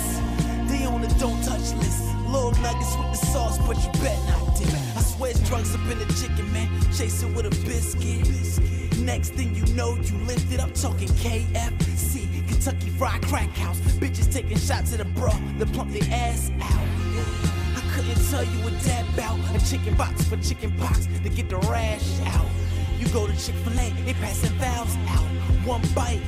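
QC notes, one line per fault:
13.24, 19.99, 21.50 and 23.78 s, dropped buffer (overrun): the sound jumps forward at each point with no gap of silence, losing roughly 70, 70, 20 and 50 ms respectively. The likely cause is the capture software not reading its buffer before the hardware overwrote it, so the missing stretch is discarded and its two edges are joined directly. On a waveform each splice is a sudden break in the shape; on a spectrogram it shows as a sharp vertical seam.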